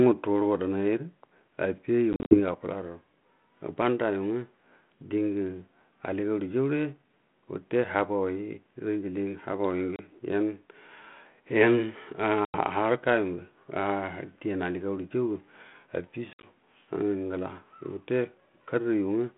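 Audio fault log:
2.13–2.40 s: packet loss on an ADPCM call, about 130 ms of silent holes scattered over 180 ms (longest 50 ms). Unlike a plain dropout, sound returns slightly distorted while the decoder's predictor and step size resynchronise.
9.96–10.00 s: packet loss on an ADPCM call, a 30 ms hard-edged gap, then a brief distorted restart as the adaptive state recovers.
12.45–12.58 s: packet loss on an ADPCM call, 90 ms of silence. The re-entry is slightly distorted for some tens of milliseconds rather than clean.
16.33–16.49 s: packet loss on an ADPCM call, 80 ms lost across 100 ms (longest run 60 ms), each resumption briefly distorted by the mismatched step size.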